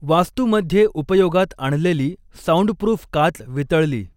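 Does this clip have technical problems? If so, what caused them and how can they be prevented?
No, this clip has no technical problems, so there is nothing that caused them and nothing to prevent.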